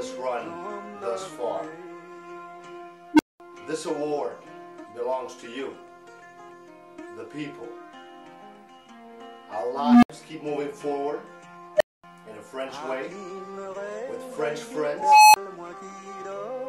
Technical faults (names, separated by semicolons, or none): unstable filter